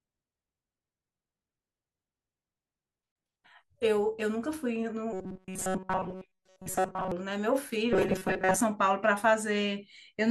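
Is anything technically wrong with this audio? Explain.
Yes. Robotic sound from repeated short buffers appears from 5.13 to 7.12 s and again from 7.93 to 8.61 s: the speech becomes a rigid metallic buzz fixed near 188 Hz, likely from a roughly 5 ms buffer looping while most of the real audio is skipped.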